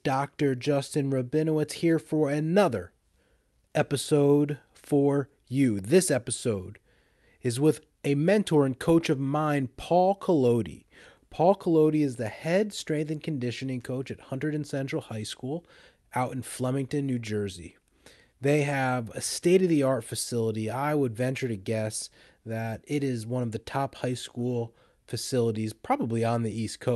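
No faults are audible in the speech; the Opus call path at 64 kbps runs normally, with the audio band limited to 12 kHz.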